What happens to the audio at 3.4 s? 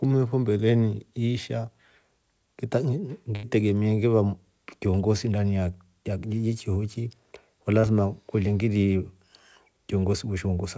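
From 3.36 to 3.46 s the sound freezes into a smeared, fading continuation of itself, then jumps ahead. This is a burst of packet loss: about 80 ms of audio never arrived, and the receiver stretched the last sound and turned it down to cover the gap.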